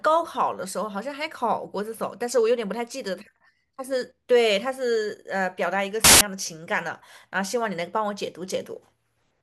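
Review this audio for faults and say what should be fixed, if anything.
From 6.04 to 6.21 s the speech is swamped by a burst of loud broadband noise lasting about 0.17 s, harsh and full-band rather than a click or dropout. This is samples built from the wrong bytes: for that stretch the reader assembled each sample from mismatched bytes, whether offset by one, in swapped order or on the wrong alignment, so the rapidly changing low bits landed in the high positions and became noise. It should be fixed by rereading that section with the correct byte order and alignment, and prevented by checking sample alignment and endianness whenever a stream is resynchronised.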